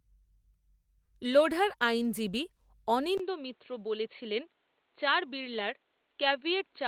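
At 3.18 s the system likely switched its input to a poorer device, such as another microphone or a headset's call profile. A silence of about 20 ms marks the change. From there to the end, the speech turns dull and boxy, with nothing above 4.4 kHz. It is also a few decibels quieter, and a faint new background noise sits far beneath the speech.

From 5.53 to 5.63 s, lost packets were rebuilt from error correction. The packets that followed carried low-bitrate copies of the missing audio, and the decoder played those copies instead of leaving a gap. About 60 ms of speech comes from those copies, which fits three lost packets. That stretch plays without a break but sounds rougher and noisier than the audio around it.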